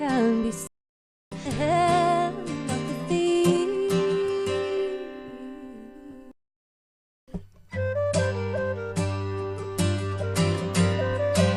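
A playback stall runs from 0.67 to 1.32 s: the sound cuts out mid-flow for about 646 ms and then carries on. This is likely the player running dry of data or having its output thread blocked until it recovered.

A skip ahead follows at 1.45 s. Roughly 0.7 s of audio was discarded while later material was already queued, and the two sides are spliced with no gap, so the sound lurches forward.

A jitter buffer speed-up appears from 1.65 to 2.19 s, at 108% with about 50 ms trimmed. A stronger one runs from 3.12 to 4.78 s, at 116% with around 300 ms removed. In both, the receiver repeatedly cut pitch-period-sized slivers to shrink excess buffered delay, so the sound hurries along while keeping its pitch.

A second playback stall, from 6.31 to 7.28 s, silences the output for about 963 ms before it resumes.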